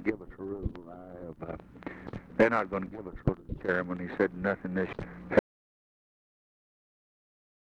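An audio dropout to silence begins at 5.39 s and runs to the end of the clip, about 2.3 s in all. The sound cuts off abruptly mid-flow and is replaced by silence, with no room tone or noise floor underneath. That points to the input signal being lost, likely through a disconnected device, a failed link or an accidental mute, while recording carried on writing silence. Nothing from that final stretch survives.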